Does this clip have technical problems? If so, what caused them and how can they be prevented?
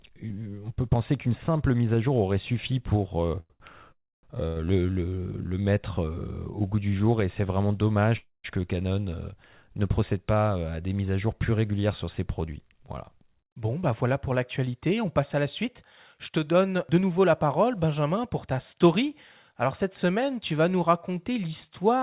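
Yes. Repeated stalls (stutter) from 3.40 to 4.58 s, after "aurait suffi pour euh": packets arrived late three times, so the jitter buffer emptied and the receiver stretched the last sound across each gap. The longest gap was 98 ms, about 0.27 s in total, with nothing lost. Preventing it means giving the network path more headroom against jitter, or letting the buffer hold a slightly larger margin.

A call audio freeze runs from 3.92 to 4.25 s, within that stutter. For about 0.31 s the sound holds and then fades, with about 0.29 s of that near silence, likely because delayed packets drained the jitter buffer. A second freeze, from 8.17 to 8.46 s after "jour et c'est vraiment", inserts about 0.27 s, with about 0.19 s silent. A stable, uncongested connection, such as wired rather than busy Wi-Fi, prevents these stalls.

A jitter buffer speed-up runs from 13.46 to 18.74 s. The receiver trimmed pitch-period slices to shed roughly 0.3 s of backlog, so the sound runs at 106% speed with its pitch unchanged. 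Avoiding the delay bursts that overfill the buffer removes the need for this catch-up.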